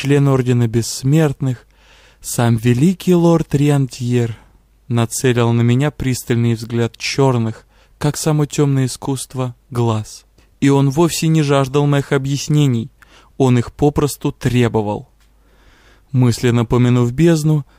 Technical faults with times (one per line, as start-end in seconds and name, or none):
none